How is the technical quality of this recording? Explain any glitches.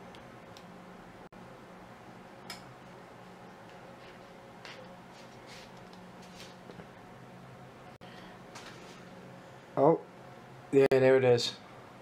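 The recording is marred by three short dropouts, each a gap at a join of encoded pieces, at 1.27 s, 7.96 s and 10.86 s, lasting about 52, 50 and 53 ms. Separately encoded segments were butted together untrimmed, so encoder start-up delay and last-frame padding remain as silence. The sound halts, then resumes where it stopped. A waveform shows flat-line notches; a spectrogram shows narrow full-height blank columns with smeared edges.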